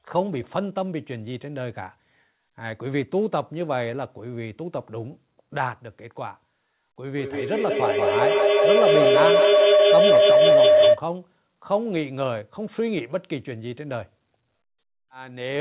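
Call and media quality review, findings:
Feedback howl, 7.18–11.06 s: tone near 700 Hz, loop delay about 200 ms, about 10 dB over speech. Two devices in one room, mic-speaker loop gaining each pass.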